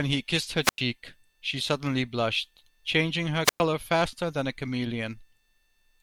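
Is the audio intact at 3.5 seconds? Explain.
No. At 3.5 seconds the speech falls inside a wireless microphone squelch dropout running from 3.44 to 3.6 s. The radio signal fades, the receiver's squelch closes and mutes the output for about 110 ms, so a short burst of hiss gives way to near silence before the speech resumes.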